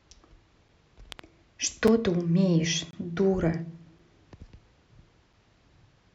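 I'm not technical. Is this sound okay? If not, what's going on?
No, there are two kinds of fault in this speech. The first is a block of digital silence. The sound drops to total silence for a split second and snaps back, giving a tiny tick at 0.69, 1.88 and 3.99 seconds, plus a slightly longer hole from 2.91 to 2.93 seconds. That happens when the playback or recording software falls behind and leaves a gap.

The second is a loud pop, actually two pops close together, between 1.12 and 1.21 seconds. They sit on top of the speech, which carries on underneath. The likely cause is an electrical jolt, from something like a plug, a switch or static, getting into the signal.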